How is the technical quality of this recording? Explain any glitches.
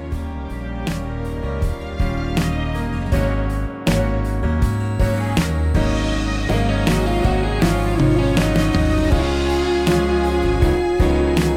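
One fault: a switching supply whistle from 4.66 s to the end, a thin tone wandering between about 3.96 and 4.15 kHz, roughly 30 dB below the signal. A power supply cycling at audible rates produces it.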